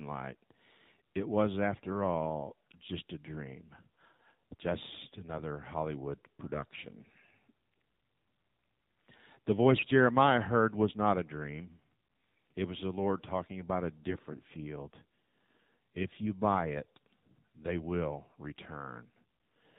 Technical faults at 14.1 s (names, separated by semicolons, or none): AMR narrowband mobile codec; AMR bit errors